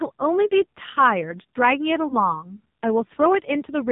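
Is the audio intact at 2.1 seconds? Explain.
No. From 2.08 to 2.33 s there are lost AMR speech frames, apparently a single 20 ms frame. The decoder repeats the previous pitch and vocal-tract settings at reduced gain, producing a brief dip and warble before the sound returns rough for a moment. On a waveform this shows as a short sag in amplitude. A spectrogram shows smeared, repeated harmonics that fade briefly.

Throughout, including this moment, the AMR narrowband mobile codec at 5.9 kbps applies heavy damage. The sound is buzzy and synthetic, with nothing above 4 kHz. A spectrogram shows a hard ceiling at 4 kHz with coarse, blocky harmonic structure below it.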